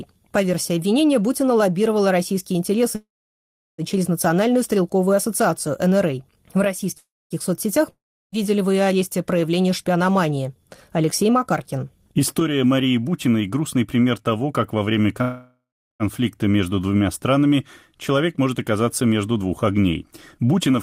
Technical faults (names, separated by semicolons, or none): call audio freeze; long network dropout; jitter buffer speed-up